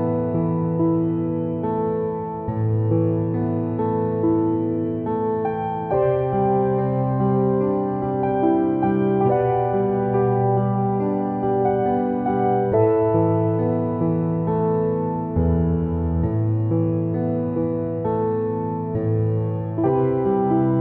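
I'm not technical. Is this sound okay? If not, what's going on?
Yes, nothing in this recording points to a technical problem with the signal itself.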